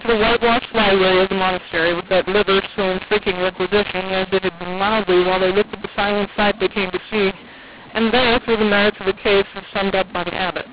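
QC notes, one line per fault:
throughout: mu-law and A-law mixed up. Mu-law bytes decoded as A-law scramble speech levels into harsh distortion and lift pauses into noise. The waveform shows a raised floor in gaps, and the spectrogram shows broadband haze below 4 kHz.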